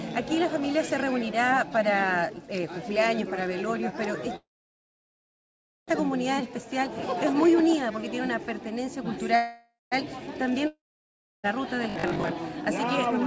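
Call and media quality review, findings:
Call audio freeze at 4.36–5.91 s and 9.36–9.95 s: the last sound decays into a fading buzz, then flat silence for about 1.41 s and 0.14 s. On the waveform the envelope collapses, and the spectrogram goes blank. Audio resumes intact, about 1.52 s and 0.56 s later. Likely a jitter buffer underrun from late packets.

Long network dropout at 10.67–11.47 s: a fading fill and then about 0.65 s of silence, shown as a flat trace and an empty spectrogram column. About 1.24 s of audio never returns, and latency shortens by roughly half a second. Likely packet loss.

Robotic sound from repeated short buffers at 11.90–12.32 s: a metallic buzz at 50 Hz, seen on the spectrogram as evenly spaced harmonic bands and on the waveform as a repeating 20 ms cycle. Roughly half the span is repeated material, likely from buffer starvation. The call path is band-limited above about 7 kHz, which fits a wideband call codec.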